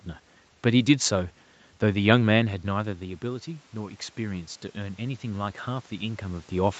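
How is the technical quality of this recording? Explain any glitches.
One glitch stands out. Automatic gain rising runs from 2.68 s to the end: after the level fell by about 13 dB, the gain control slowly raised its gain, so speech and room noise swell up together.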